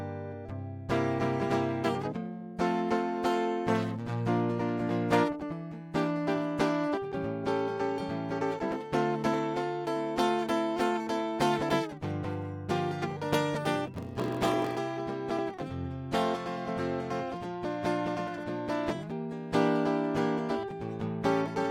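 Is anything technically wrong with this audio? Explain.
Yes, there's one problem in this music. From 13.92 to 14.77 s there's a block size mismatch (padded). One stage hands over shorter blocks than the next one reads, which fits a 1024-sample read, and zeros fill each gap. You hear a 46.9 Hz buzz, and the music drags to 0.938 speed with pitch about unchanged.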